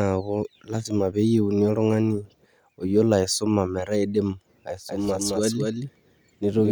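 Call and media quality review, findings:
Doubled audio track from 4.89 s to end: full-band copy about 200 ms behind, roughly 5 dB down, no decay, cuts in abruptly. Likely a second, slower capture path mixed in.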